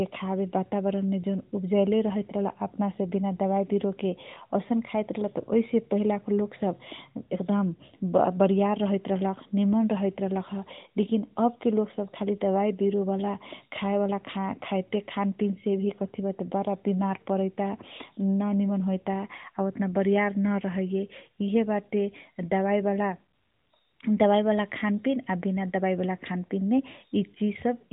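No technical faults are audible.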